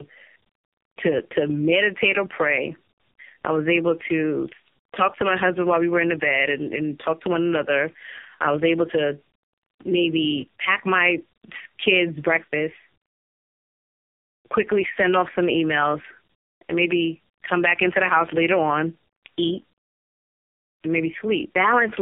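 Throughout, tandem speech coding: repeated decoding and re-encoding through several narrowband codecs leaves the speech rough, muffled and warbly. On a spectrogram, nothing appears above 3.6 kHz, and the harmonics look smeared.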